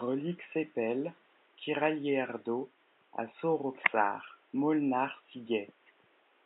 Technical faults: none

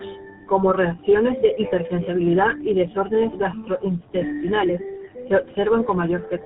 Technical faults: tandem speech coding

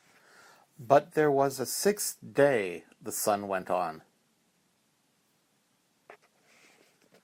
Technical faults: overlap between stream segments

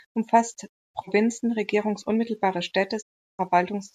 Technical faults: digital broadcast dropout

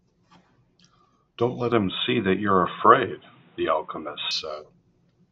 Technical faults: input switched to a poorer device

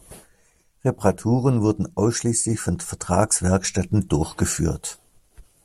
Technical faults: none

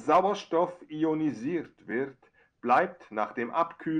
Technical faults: none

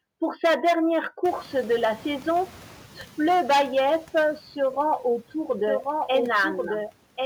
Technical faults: sample clock jitter; noise suppressor catching up; doubled audio track

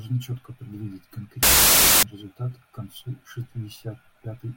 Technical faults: wrong sample width

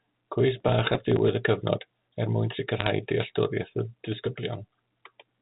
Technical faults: processor overload crackle; bit errors on a digital phone line

